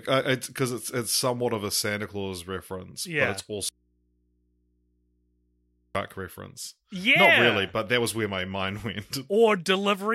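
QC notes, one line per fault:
3.69–5.95 s, audio dropout to a faint residue: right after "reference yeah but it's" the speech cuts out abruptly for about 2.26 s and then returns mid-flow, with no fade on either side. What fills the gap is mains hum, sitting very low at roughly 45 dB below the speech. The wanted signal was likely lost upstream while the input stage after the break stayed live and unterminated, so the hum it picked up is all that gets through.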